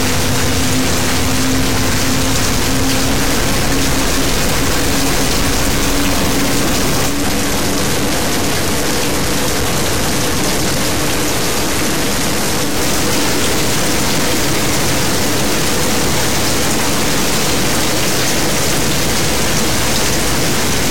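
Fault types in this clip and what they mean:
Stuck bit: Distortion runs through the whole clip, with noise filling the quiet gaps, likely from one data bit stuck at a fixed value.
Digital radio blending to analogue: From 7.05 to 12.79 s the sound cross-fades over 158 ms to FM, dropping about 2 dB, with faint hiss.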